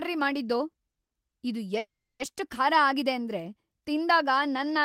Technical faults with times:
0.71-1.17 short stall from a late packet
1.79-2.22 call audio freeze

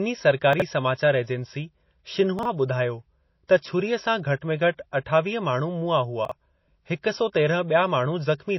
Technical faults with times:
0.00-8.58 MP3 compression
0.53-0.62 chunks out of order
2.39-2.45 chunks out of order
3.48 pre-echo
6.25-6.31 chunks out of order

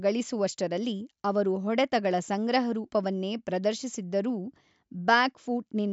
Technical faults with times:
none

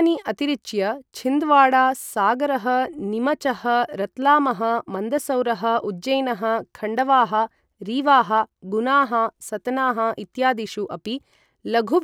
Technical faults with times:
none

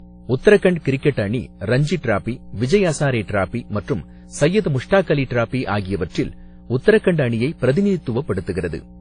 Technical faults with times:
0.00-9.00 mains hum
0.00-9.00 transcoding between lossy codecs

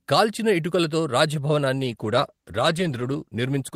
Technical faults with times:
1.78-3.76 call bitrate drop

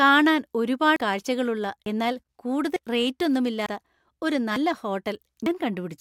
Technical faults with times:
0.96 audio missing between chunks
1.86 audio missing between chunks
2.76 audio missing between chunks
3.66 audio missing between chunks
4.56 audio missing between chunks
5.46 audio missing between chunks

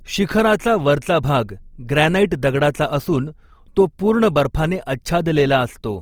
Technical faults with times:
0.00-6.02 Opus compression

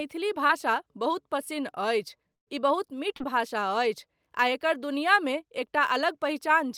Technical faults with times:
0.47-0.51 short concealed packet loss
2.35-2.48 burst of packet loss
3.16-3.33 short concealed packet loss

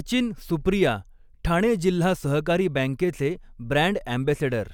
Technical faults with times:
none

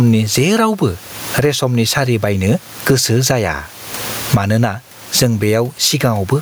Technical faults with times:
0.00-6.42 gain pumping

